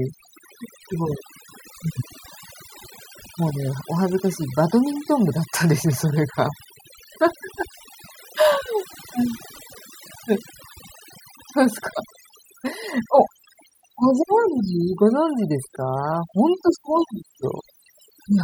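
A noise reduction stage set far too aggressively runs through the whole speech clip, an overdone noise removal that mutes individual frequency bands near its noise estimate and takes quieter parts of the voice along. The background drops and breaks up into twinkling specks.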